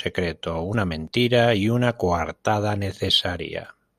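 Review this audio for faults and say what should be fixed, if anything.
Nothing to fix; no faults are audible anywhere in the speech.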